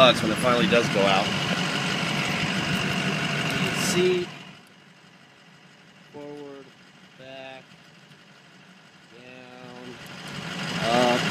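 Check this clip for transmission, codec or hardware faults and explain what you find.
There's one fault here: zipper noise near the end, from 9.46 to 10.98 s. Whatever is changing the level moves it in 2 dB jumps instead of a smooth ramp, about ten steps a second, covering around 25 dB in all. Each jump is an instant discontinuity in the waveform, so it produces a tiny click. Strung together, those clicks give a ticking, zipping texture riding on the sound while the level travels.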